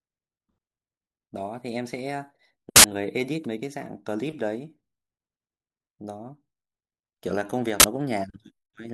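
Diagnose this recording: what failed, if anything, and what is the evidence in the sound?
This one's a buffer problem in the driver or playback path: an uninitialised buffer, twice. The speech gets punched through by a short, loud burst of digital noise from 2.76 to 2.84 s, then again from 7.80 to 7.84 s, lasting 80 ms and 40 ms. What happened is that a block went out to the output before any audio was written into it, so whatever leftover memory sat there got played as samples.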